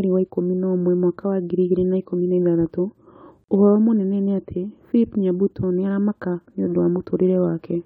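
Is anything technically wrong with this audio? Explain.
Yes. At 3.44 to 3.49 s, a gap at a join of encoded pieces cuts the speech for 45 ms. Untrimmed encoder delay and padding leave a short silence with smeared edges before "ũhoro mũnene nĩ ati".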